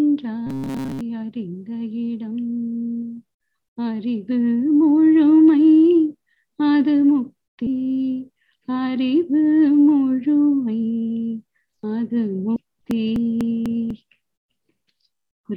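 From 0.47 to 1.01 s the sound turns into a rigid metallic buzz at 134 Hz, likely robotic sound from repeated short buffers: a roughly 7.5 ms block replays through most of that stretch. Brief glitches at 7.66 s and 12.56 s come from damaged data in a compressed stream, where the decoder loses frame sync. Unlike the even dropouts that follow, these are isolated. From 12.66 to 15.39 s, periodic USB or driver dropouts remove about 2 ms every 0.248 s, roughly ten times. Each loss is skipped rather than silenced, giving evenly spaced ticks with no pitch of their own.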